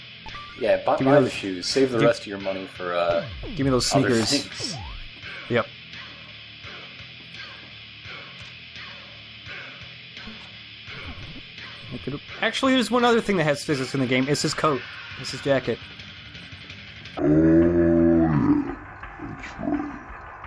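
Right at 17.19 s and running to the end, the sound suddenly drops to half speed and a full octave lower, 12 semitones down. That's a wrong sample rate fault: the samples are being clocked out at about half the rate they were captured at, with no resampling, so timing and pitch stretch together. The halving fits 44.1 kHz material played back at 22 kHz. It's why that last stretch comes across slow, heavy and dragged-out.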